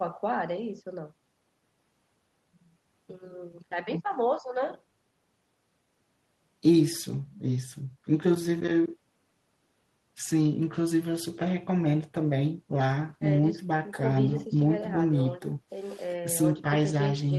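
No technical faults occur at any point in the speech, so there is nothing to describe in time order.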